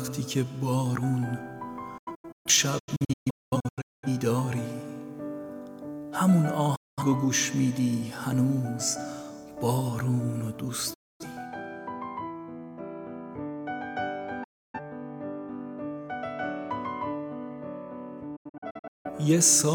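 The sound drops to silence in a series of holes: a scattered cluster from 1.98 to 4.08 s losing about 1.15 s in total, runs no longer than 0.21 s, then single gaps at 6.76 to 7.03 s, 10.94 to 11.25 s and 14.44 to 14.80 s, and a final cluster from 18.36 to 19.09 s. Each cut fades in 8 ms. This is digital broadcast dropout: the receiver muted corrupted frames, and that audio is gone.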